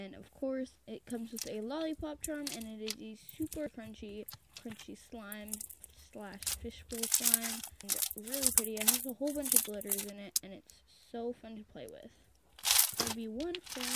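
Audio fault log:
No audible faults found anywhere in the recording.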